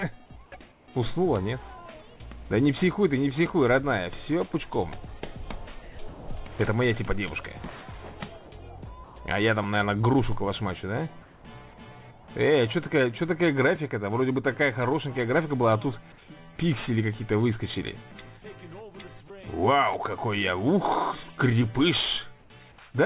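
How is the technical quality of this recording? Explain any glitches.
The recording has two kinds of glitch, both tied to discontinuous transmission on a call link whose audio stops at 4 kHz, which points to G.711 A-law at 64 kbps.

Comfort noise in place of the background appears at 0.72–0.88 s, 9.04–9.16 s, 11.22–11.44 s and 22.4–22.5 s. In these pauses the background, sitting about 21 to 33 dB below the loud passages, turns into a steady, featureless hiss about 2 to 5 dB quieter. The likely cause is the sender ceasing transmission during quiet stretches while the receiver synthesizes shaped noise until audio resumes.

Sound dropped by the voice detector occurs twice in quick succession: at 5.82–5.98 s, where about 110 ms of sound is lost, and at 6.08–6.28 s, where about 170 ms is lost. In both places the sound is cut away and replaced by the same flat noise, then returns. This likely comes from the sender's voice detector misjudging quiet sound as background and stopping transmission, leaving the receiver to insert comfort noise until the detector triggers again.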